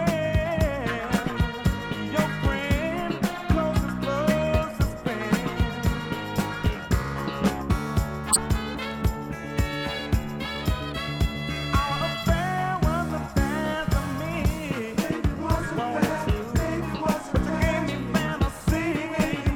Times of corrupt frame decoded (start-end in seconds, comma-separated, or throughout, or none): 5.05, 8.30-8.39